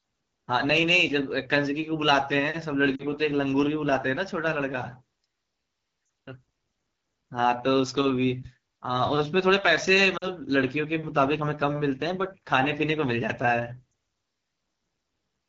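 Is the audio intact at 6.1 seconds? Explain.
No. Around 6.05 to 6.09 s the speech briefly drops to near silence for about 40 ms. These are lost AMR speech frames, consistent with two dropped 20 ms frames: the decoder repeated the last good pitch and vocal tract settings at falling gain before recovering. Throughout, including this moment, the sound is rough and raspy from the AMR wideband (HD Voice) codec at its low 8.85 kbit/s rate.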